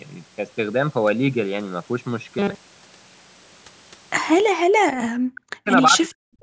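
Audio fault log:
2.39–3.55 s, robotic sound from repeated short buffers: the speech becomes a rigid, metallic buzz at 200 Hz that still roughly tracks the syllables. This is likely from audio arriving too seldom, with the playback repeating the last 5 ms of sound to fill the gap, so most of this stretch is repeated rather than real.
4.52–4.59 s, background gated by the echo canceller: the room sound drops out for about 70 ms, falling by about 40 dB, then returns. The echo canceller clamped the microphone down hard while the loudspeaker was playing and released it once it stopped.
4.87–5.69 s, 5.90–6.17 s and 6.36 s to the end, speech suppressed in double talk: the voice dips deeply and cuts out in pieces, most heavily in the first span. This is likely the echo canceller failing to tell the talker from the loudspeaker echo while both sides spoke, so it turned both down.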